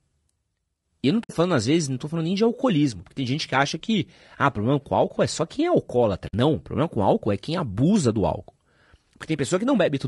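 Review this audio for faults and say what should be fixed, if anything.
The speech sounds rough and grainy throughout, with noise filling the gaps between harmonics and a thin, synthetic top band, likely from low-delay AAC compression such as AAC-ELD at a low bitrate around 32 kbps. The short frames resolve pitch harmonics poorly. Unlike broadband noise, this roughness follows the voice and disappears in pauses. Raising the bitrate or using a longer-frame codec would prevent it.

Two soft-edged holes at 1.23–1.31 s and 6.27–6.34 s come from AAC frame loss with muting. The decoder zeroed the spectrum of the missing audio, about 60 ms each time, which fits three lost frames, and the overlapping windows fade it out and back in. Unlike a dropout with a hard edge, the edges are faded rather than abrupt. Better packet protection or loss concealment would prevent these holes.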